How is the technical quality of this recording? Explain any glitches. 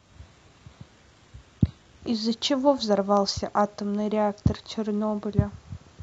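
The opening couple of seconds are thin, then the recording sharpens up. From 0.0 to 2.0 s we've got an adaptive stream starting at a low bitrate: the player began on a cheap rendition, which sounds like HE-AAC around 16 kbit/s with synthetic-sounding treble and heavier artefacts, then stepped up without a gap to something like 96 kbit/s AAC-LC.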